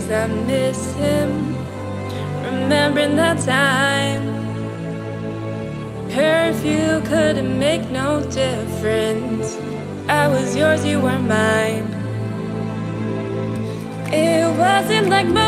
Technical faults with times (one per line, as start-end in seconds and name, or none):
none